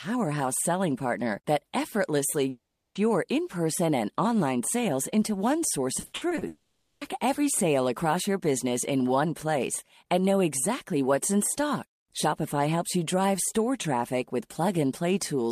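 From 2.49 to 2.97 s, the speech smears into a fading buzz, then goes quiet for about 0.36 s before resuming with a piece gone. This is likely a long network dropout, with the receiver stretching the last sound over the 0.46 s gap.

From 5.99 to 6.43 s, the speech turns choppy. This is repeated packet loss (robotic sound): a string of holes up to 60 ms long, patched over about half that span.

From 6.47 to 7.03 s, what is likely a second long network dropout sustains a buzzy continuation for the full 0.54 s without falling silent, and that stretch of speech is lost.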